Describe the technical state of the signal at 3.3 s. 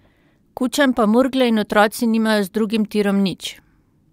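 At 3.3 s the speech signal is intact, with no audible dropout, distortion, glitch or other technical fault at that moment.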